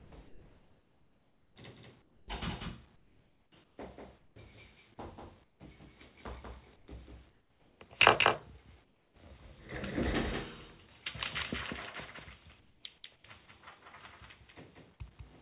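A doubled audio track runs throughout: a second full-band copy trails by roughly a fifth of a second, a few dB quieter, likely from a second capture path, showing as repeated transients in the waveform. From 0.0 to 2.28 s the sound is chopped by the voice detector, likely switching transmission on and off, so sound edges give way to flat synthetic fill. On a spectrogram, detailed texture alternates with smooth noise bands. Comfort noise in place of the background appears at 2.96–4.36, 5.44–5.6, 6.76–7.8, 8.84–9.16 and 12.6–13.24 s, likely from discontinuous transmission. Each stretch shows as a featureless, even noise floor, and at 5.44 and 8.84 s it is about 8 dB quieter, all within the call path's band, which is empty above 4 kHz.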